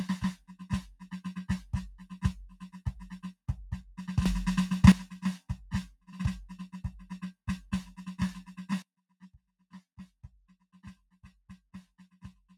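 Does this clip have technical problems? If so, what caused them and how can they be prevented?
Yes. Across the whole piece of music the level pumps and flutters, with held tones and decays sinking by around 10 dB while attacks pass. This is a noise suppressor applied to music: a speech-oriented suppressor treats sustained tones and reverb tails as noise and keeps pulling them down. Bypass noise suppression, or switch to a music mode, whenever the source is not speech.

Sounds cut by the noise suppressor appear as sudden dips where sustained material collapses: 0.35 to 0.66 s (about 16 dB), 2.49 to 2.8 s (about 11 dB), 5.93 to 6.1 s (about 17 dB), 8.98 to 10.25 s (about 18 dB) and 10.51 to 10.78 s (about 14 dB). Here the suppressor judged those passages as noise and attenuated them harder than the surrounding music. Disabling the suppressor for music prevents these drops.

Sudden gain jumps hit twice. 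From 4.26 to 4.92 s everything, background included, leaps up about 12 dB and then returns. From 8.82 s to the end it falls about 16 dB at once. The likely cause is a gain change applied between adjacent samples with no ramp. Smoothing every gain change over a short ramp prevents these steps.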